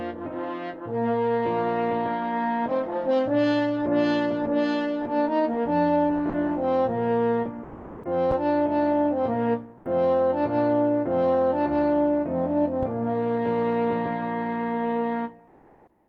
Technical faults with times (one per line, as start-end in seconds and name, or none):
6.29-6.33 sound dropped by the voice detector
7.63-8.03 sound dropped by the voice detector
8.31-8.38 phantom power thump
9.77-9.85 comfort noise in place of the background
12.83-13.05 phantom power thump
15.47-16.08 comfort noise in place of the background